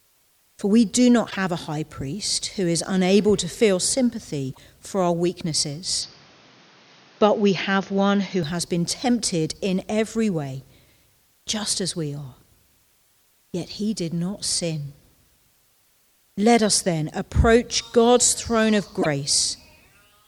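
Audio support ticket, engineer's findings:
Damaged data in a compressed stream, three events: short chirp/blip at 1.27–1.36 s, 4.48–4.58 s and 18.98–19.06 s, each about 0.1 s. Decoder component. Corrupt bytes in the compressed frames; decoder misreads or drops them, loses sync and resumes at the next valid frame header, producing the squawk.

Input switched to a poorer device, 6.02–8.43 s: sound abruptly turns dull and narrow, nothing above 6.6 kHz, then clears again at the end. No gap at either transition; level roughly unchanged. New background noise floor about 35 dB below the signal. Capture/input routing, likely a switch to a lower-bandwidth microphone or headset call profile, then back.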